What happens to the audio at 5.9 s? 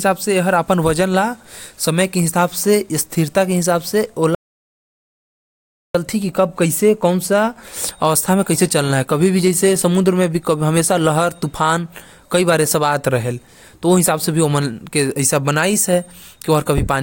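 At 5.95 s the speech cuts back in abruptly after about 1.6 s of dead silence that began at 4.35 s, with no room tone in the gap. This is an audio dropout to silence, likely a lost input while the recorder kept writing silence.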